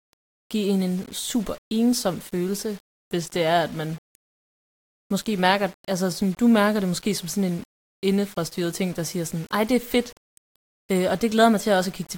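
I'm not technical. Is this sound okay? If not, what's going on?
No. Throughout, the speech sounds grainy and gritty, worst on quiet parts, most likely low bit depth without dither: the sound was squeezed into roughly 7 bits.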